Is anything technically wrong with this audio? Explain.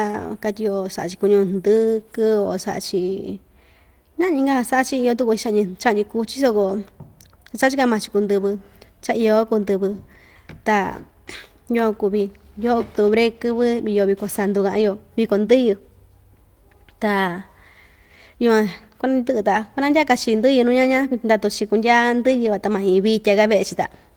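Yes. There are six brief lost packet rebuilt from error correction events, at 0.33 s, 1.49–1.55 s, 3.27–3.29 s, 13.07–13.09 s, 14.73–14.83 s and 18.47–18.49 s. Dropped packets were replaced by low-bitrate copies carried in the following packets, so the speech never goes silent. Each rebuilt stretch of 20 ms, 40 ms or 60 ms instead sounds momentarily rougher and noisier.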